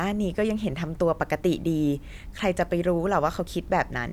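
No technical faults can be heard anywhere in the speech.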